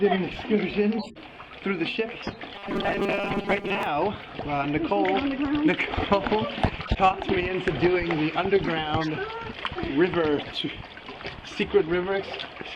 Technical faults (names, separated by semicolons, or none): corrupt frame decoded; robotic sound from repeated short buffers